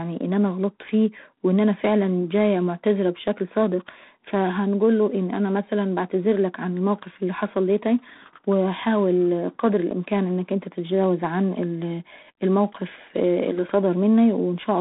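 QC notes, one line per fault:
Throughout, G.726 ADPCM: the speech carries a harsh, rasping hiss that rises and falls with its level, growing loudest on louder syllables. The sound is confined to a telephone band of about 150 Hz to 3.7 kHz, with nothing above 3.9 kHz. The codec sends only a few bits per sample describing the error of an adaptive prediction, so coarse quantisation noise rides on the signal. This grain fits the 24 kbit/s mode.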